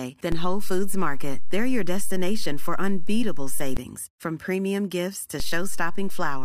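A DC step shifts the zero line of this speech clip at 0.32 s, an offset of about -16 dBFS that holds until 3.77 s, just before "from premium gifts to", and again at 5.4 s, about -18 dBFS, lasting to the end. Each jump lands as a low thump under the unchanged speech.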